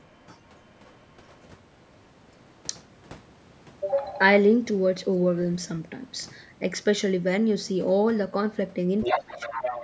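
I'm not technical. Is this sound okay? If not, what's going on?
No. There are two problems. The first is the other side's voice leaking through. From 0.0 to 0.26 s and 0.47 to 1.06 s, a faint second voice sits underneath. From 9.01 s to the end it gets much louder, almost as loud as the main talker. The likely cause is the other person's voice playing from a loudspeaker and being picked up again.

The second is speech suppressed in double talk. From 9.12 s to the end, both people talk at once. The main voice dips clearly and sounds weaker for about 0.7 s. Likely the call's echo removal turned everything down because it couldn't tell the two voices apart.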